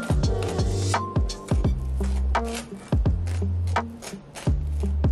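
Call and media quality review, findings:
No findings from the call and media quality review.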